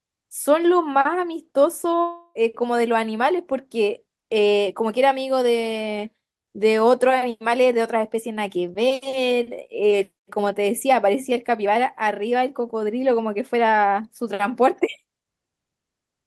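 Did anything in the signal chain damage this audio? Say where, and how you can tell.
Yes, at the network stage: a long network dropout, likely a stall in packet delivery, cut the audio from 2.01 to 2.37 s. About 340 ms of speech never arrived, and the receiver covered nearly all of that gap, about 338 ms, by extending the last sound into a fading buzz or hiss, leaving only about 10 ms of silence. When the stream resumes at 2.37 s, the speech jumps ahead and the lost stretch is missing.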